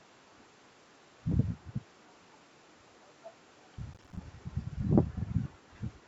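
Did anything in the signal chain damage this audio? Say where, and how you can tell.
Yes. At the call-processing stage there is an echo leak: faint copies trail speech by 256 ms at 3.38–3.55, 4.62–4.66 and 5.53–5.7 s, about 35–40 dB down. This is likely residual loudspeaker echo that the canceller missed, and it shows as ghostly delayed harmonics on a spectrogram.

In the driver or buffer stage, processor overload crackle runs from 3.94 to 4.17 s. Repeated missed deadlines drop roughly 5 ms chunks to silence, which appear as hard-edged waveform notches and vertical broadband spectrogram streaks.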